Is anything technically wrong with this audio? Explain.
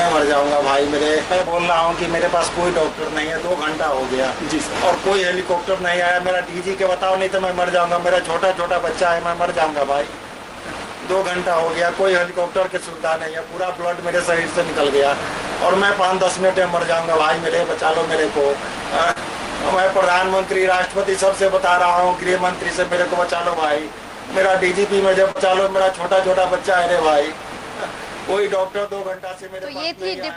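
Yes. Short concealed packet loss occurs at 19.11–19.18 s and 25.31–25.38 s. About 40 ms of audio arrived too late each time, so the receiver extrapolated the preceding sound and crossfaded back, leaving a brief smear or wobble. A spectrogram shows smoothed, repeated harmonics or blurred noise there; the waveform shows repetitive cycles or shaped noise.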